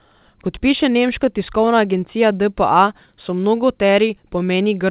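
Clock drift between sender and receiver runs through the whole speech recording. The sending end's clock is roughly 3 percent slow, so the receiver's jitter buffer keeps draining. On a waveform, spacing between syllables looks slightly stretched and uneven rather than steady.

From 0.07 s to 4.4 s, repeated timing corrections fill that gap, stretching playback to 97 percent speed and adding about 150 ms in total. Each repeated fragment is small, heard at most as faint hiccups or a wobbling tempo. A spectrogram shows brief duplicated slivers, all capped at 4 kHz by the G.711 mu-law call path.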